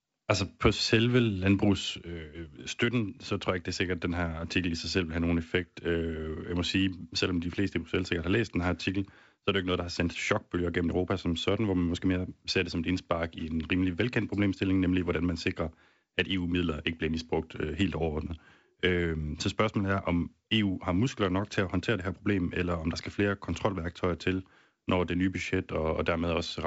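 Speech clip with no technical faults to report.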